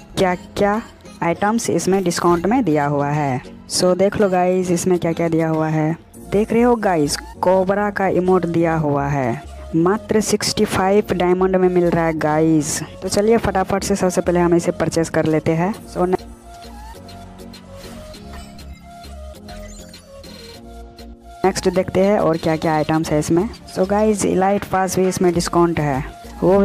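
No technical faults are audible anywhere in this audio.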